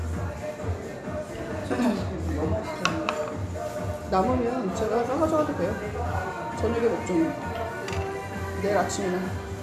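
A clip of everyday sounds, with nothing technically wrong with it.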